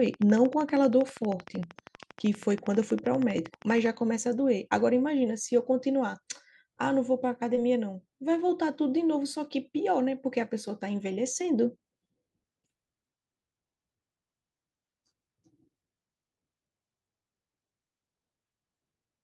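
From 0.06 s to 3.87 s a train of clicks runs under the speech: about fifty sharp, near-identical ticks at a steady 12.6 per second, a few decibels above the signal itself, so they stand out in the pauses as well as over the speech. The cause is likely interference or a faulty connection or power supply. On a spectrogram they appear as evenly spaced thin vertical lines spanning the frequency range. The waveform shows matching narrow spikes.

At 7.55 to 7.59 s there is a short concealed packet loss. About 20 ms of audio never arrived, and the receiver patched roughly 16 ms of it by extending the preceding sound before blending back into real audio. It is heard as a brief smear or wobble, and a quick consonant may drop out. On a spectrogram the harmonics or noise run unnaturally flat for that instant, and the waveform shows a repeated, slightly fading cycle at the seam.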